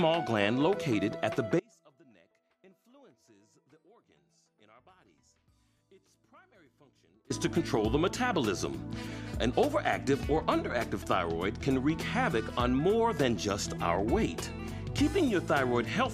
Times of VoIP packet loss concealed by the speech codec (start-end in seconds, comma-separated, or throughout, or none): none